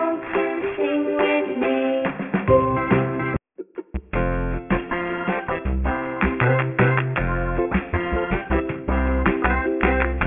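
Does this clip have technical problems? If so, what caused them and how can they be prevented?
Yes, there's aliasing running through the whole clip. It sounds like the audio was dropped to a much lower sample rate, something like 6 kHz, without a low-pass filter first. Everything above about 3 kHz has folded back down into wrong, unrelated frequencies, and those folded tones sit only roughly 15 dB under the real sound, so the top end comes across gritty and metallic. To prevent it, always run a proper anti-aliasing filter before downsampling.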